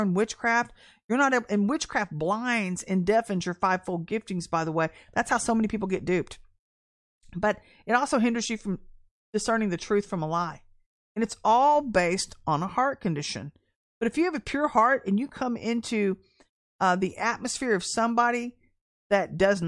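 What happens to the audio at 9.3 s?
Nothing goes wrong at 9.3 s: the speech carries on cleanly through that moment with no dropout, click or distortion.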